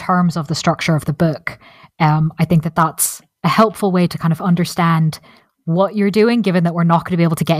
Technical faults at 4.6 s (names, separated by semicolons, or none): call bitrate drop